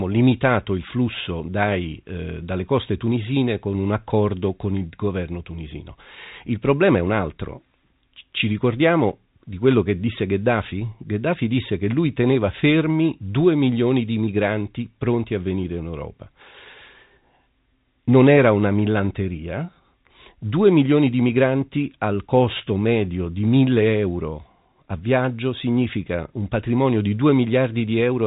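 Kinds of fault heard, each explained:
No faults are heard in this speech, which has passed through G.711 telephone coding at its usual 64 kbps, so the band stops at about 3.8 kHz as that format intends.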